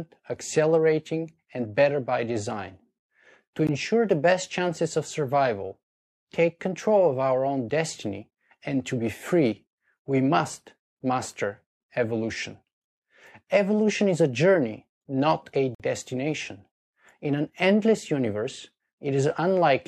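Gaps between stream segments at 3.67 s, 7.70 s and 15.75–15.80 s: hard-edged silent holes of 5 to 50 ms, where 4-second segment timestamps fail to meet.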